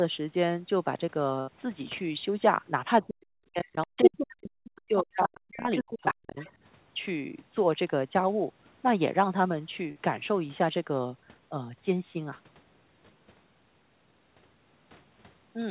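From 3.01 to 4.54 s and again from 4.82 to 6.39 s the speech sinks sharply, by around 40 dB at its deepest. This is speech suppressed in double talk. Both sides were likely talking at once, and the echo canceller, unable to separate its own talker from the loudspeaker echo, turned everything down.

Inside and just around those dips, the other side's voice leaks through at 3.97 to 4.23 s, 4.64 to 4.81 s, 5.36 to 5.40 s, 5.71 to 6.14 s and 6.39 to 6.51 s. It ranges from a faint scrap well below the talker to a voice as loud as, or slightly louder than, the speech itself. The likely cause is an echo canceller that failed to remove all of the loudspeaker sound from the microphone.

At 9.92 to 9.98 s there is a brief smear where about 40 ms of the call went missing. This is short concealed packet loss: the receiver continued the preceding sound to fill the gap, then blended back into the real audio. 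The whole clip is band-limited to about 4 kHz by the G.711 call codec.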